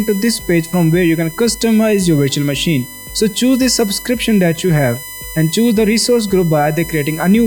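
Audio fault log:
Throughout: USB whine. A fixed-pitch tone at 1 kHz, strongest at 2 kHz, sits around 20 dB below the signal. The bus's 1 ms frame current leaks in.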